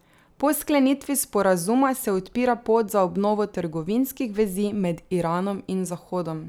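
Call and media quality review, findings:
No audible faults found.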